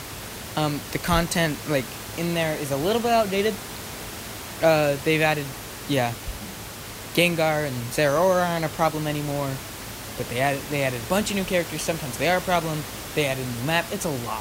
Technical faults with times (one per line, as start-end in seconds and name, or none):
none